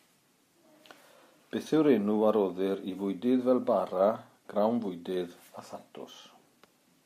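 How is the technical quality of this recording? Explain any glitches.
There are no technical glitches to explain in this speech recording. Nothing in the audio stands out as a fault at any point.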